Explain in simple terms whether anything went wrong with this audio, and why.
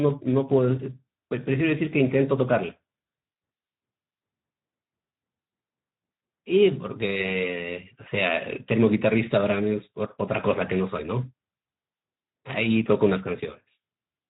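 The speech was squeezed through the Speex codec, an older voice-chat compressor, with too little data to describe the voice fully. From start to finish it rebuilds the voice only approximately, so the speech sounds noticeably rough, grainy and hoarse rather than clean.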